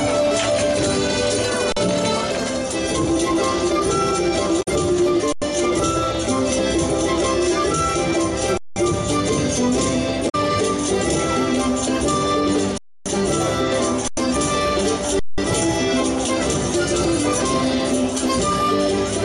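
The audio stalls six times, freezing on a flat, held level with almost no click and then carrying on where it stopped. These are underruns with a held sample at 1.72 s (42 ms), 5.32 s (93 ms), 8.58 s (186 ms), 12.78 s (279 ms), 14.08 s (93 ms) and 15.19 s (186 ms). Each time the output buffer ran dry and the converter kept outputting its last value until data arrived. Because nothing was skipped, the restarts come in softly. The gap lengths from 93 ms upward step in multiples of about 46 ms, which fits refills of 2048-sample blocks at 44.1 kHz. Separately, there are two brief glitches at 4.59 to 4.68 s and 10.26 to 10.35 s. These come from damaged data in the compressed stream: corrupted bytes made the decoder misread frames, lose sync and hunt for the next valid frame header before decoding normally again.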